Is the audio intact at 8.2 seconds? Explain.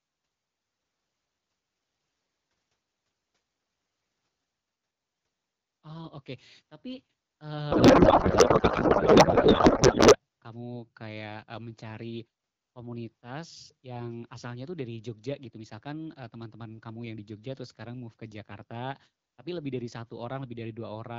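No. From 7.71 to 10.16 s, just before "kamu kayak e mencari", a codec payload misread occurs: octet-aligned AMR frames are unpacked as bandwidth-efficient, misplacing every field. The sound becomes garbled, warbling noise, and a spectrogram shows harmonics replaced by smeared, noise-like energy.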